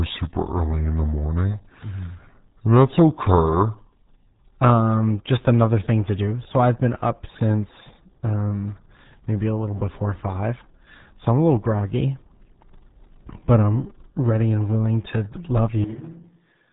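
The whole clip went through the RealAudio 14.4 codec at 8 kbit/s, which discards everything above 3.8 kHz and leaves the speech muffled, gargly and heavily degraded.

From 0 to 4.39 s, a section at the wrong speed, likely fitted to the wrong clock, plays at 0.763 times speed. It sounds about five semitones low, deep and dragging.

At 15.84 s, just after "and willing to love", the recording switches to a distant microphone until the end. The voice drops about 10 dB and turns hollow and roomy, with background noise coming up beneath it.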